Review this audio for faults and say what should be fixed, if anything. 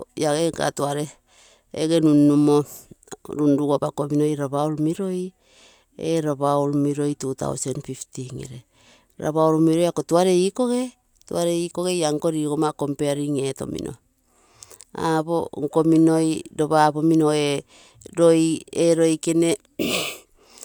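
No faults can be heard anywhere in this speech recording. Nothing needs to be fixed.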